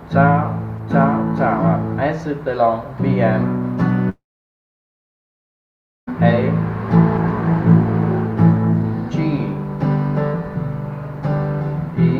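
At 4.09 s the audio breaks off and stays gone until 6.09 s, about two seconds. This is most likely a long network dropout: no data reached the receiver, which briefly extended the last sound as a fading buzz or hiss for roughly a tenth of a second before leaving silence. Unlike a short packet-loss glitch, the gap is long and mostly silent, and the audio resumes later with the missing stretch skipped rather than delayed.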